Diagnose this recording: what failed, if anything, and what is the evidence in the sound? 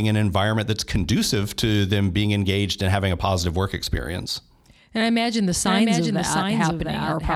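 A doubled audio track appears from 5.65 s to the end. It was likely caused by the same signal being captured a second time through a slower path, or by an edit that left two misaligned copies in the mix. From that point, a full-band duplicate of the speech trails the original by roughly 0.7 s, about 5 dB quieter. It enters abruptly, with no decay or room colour, so each phrase seems to be repeated over the next.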